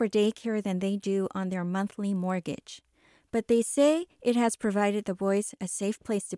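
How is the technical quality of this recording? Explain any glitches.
A steady 50 Hz buzz rides on the speech from 2.04 to 4.32 s, between "they do on their" and "has provided the". This is a resampler restarted on every block. Each 20 ms block was converted separately, likely a 48 kHz to 24 kHz conversion, leaving a small error at every block edge.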